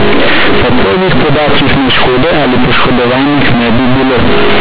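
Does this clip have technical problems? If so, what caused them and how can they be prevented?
Yes: throughout, there's companded audio read as linear. The mu-law bytes are played raw as 8-bit samples, so quiet parts blow up into loud, buzzy distortion with hiss in pauses. Label the stream as mu-law so the player expands it before output.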